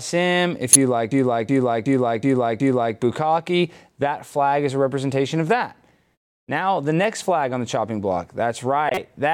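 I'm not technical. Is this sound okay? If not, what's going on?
No, there are two problems.

First, a corrupt frame decoded, heard twice: from 0.72 to 0.76 s and again from 8.89 to 8.98 s. The audio was stored in compressed chunks, and a few of those chunks got damaged. The player played them anyway, so instead of the real sound you get a short, sharp squeak or burst of noise. The first one is very loud, and the second is nearly as loud.

Second, a system hang loop, from 1.12 to 2.97 s, ending just before "bukkake that flag is". The computer briefly froze, but the sound card kept replaying the last bit of audio it had. That means one 0.37-second snippet repeats five times in a row, a bit under three times a second, and it comes across as a choppy, stuck-record stutter.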